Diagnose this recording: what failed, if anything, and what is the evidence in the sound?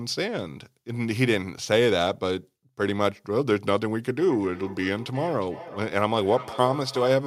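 Feedback echo between two devices, from 4.17 s to 7.26 s, at the call-processing stage: the speech returns at an interval of roughly 0.4 s, peaking about 15 dB below the direct sound. A second device's loudspeaker feeds this microphone, and the local echo canceller ignores sound it didn't play.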